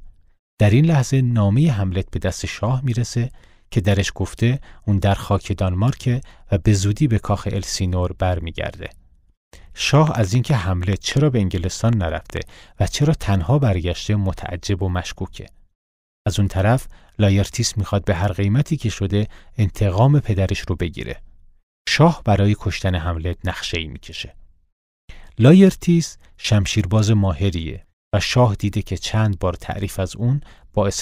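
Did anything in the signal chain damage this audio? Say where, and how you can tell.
Yes: likely analogue-wiring interference adds a train of clicks, 9.95–12.38 s, unevenly spaced at 4.5 per second and about 5 dB above the speech.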